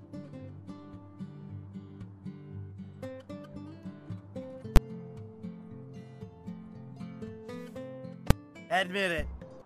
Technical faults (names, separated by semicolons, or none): invalid numbers at full scale